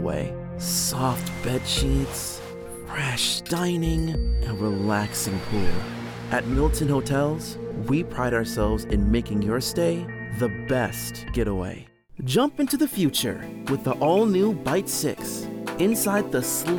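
A feedback whistle runs from 3.82 to 6.00 s: a thin, steady tone at 4.6 kHz sitting well below the main sound and swelling and fading slowly in level. Its likely cause is a loudspeaker-to-microphone loop poised at the edge of feedback, sustaining one frequency without escalating.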